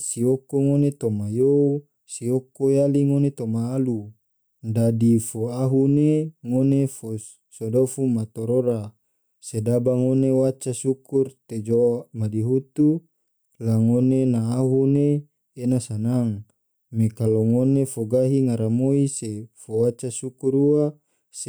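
A speech recording with gain pumping running through its whole length: the level is pulled down on each loud sound, a swing of roughly 5 dB, leaving loud and soft parts closer together and the sound squashed. The likely cause is input gain set far too high, with a fast limiter or compressor clamping each loud peak. On a waveform the peaks look flattened to a near-constant ceiling.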